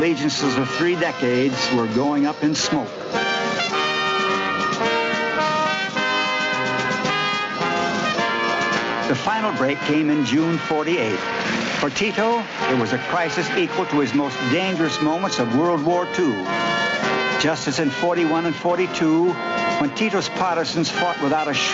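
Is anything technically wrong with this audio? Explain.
Yes. Gain pumping runs through the whole clip. The level ducks under each loud sound by around 10 dB, squashing loud and soft parts together. The likely cause is input gain set far too high, with a fast limiter pulling it back on every peak. On a waveform, loud and soft parts sit closer in level than normal. A spectrogram shows a flat ceiling at 8 kHz set by the call path.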